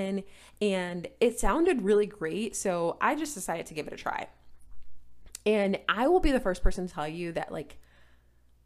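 Nothing in this recording jumps out as a technical fault, so there's nothing to flag anywhere along it.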